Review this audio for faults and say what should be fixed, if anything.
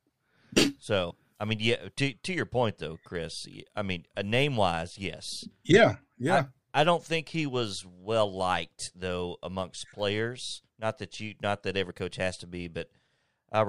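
Damaged data in a compressed stream appears twice in this speech. Corrupted bytes in the encoded data make the decoder misread frames, lose sync and search for the next valid frame header, so the audio breaks into a brief chirp or squawk. The first runs from 1.07 to 1.11 s, just before "I mean yeah". The second is a shorter blip at 11.9 s, between "that you not that" and "coach has to". To prevent it, verify the stream with checksums and resend or replace damaged frames before decoding.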